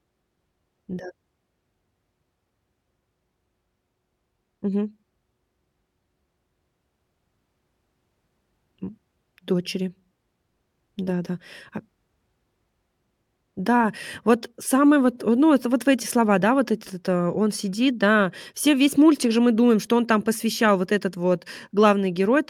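No technical faults can be heard anywhere in the recording.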